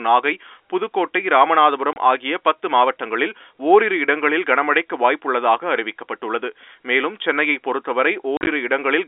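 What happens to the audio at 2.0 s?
Just before 2.0 s, from 1.93 to 1.96 s, there is packet loss filled with silence: a 30 ms hole where the receiver had no data and played nothing. The gap's length fits three consecutive 10 ms packets going missing. Because the sound stops and restarts abruptly rather than fading, the speech is briefly chopped. The narrow telephone band of the G.711 line remains audible around the dropout.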